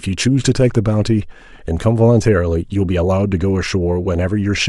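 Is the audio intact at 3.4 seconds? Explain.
Yes, at 3.4 seconds the speech plays through intact, with no audible fault at that moment.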